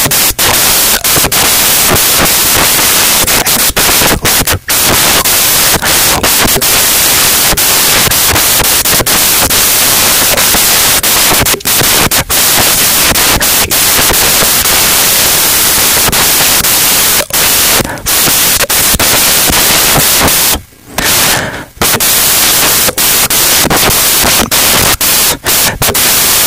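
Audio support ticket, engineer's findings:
Samples built from the wrong bytes, whole clip: loud white noise. Byte misalignment or swapped order in reader. Spectrogram broadband flat; waveform dense hash, thinning only near-silent.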